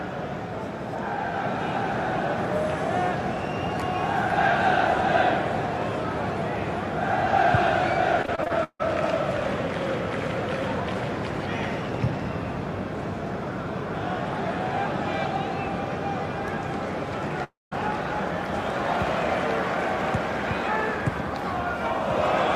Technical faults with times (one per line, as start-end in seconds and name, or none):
8.22-8.84 repeated packet loss (robotic sound)
17.44-17.73 long network dropout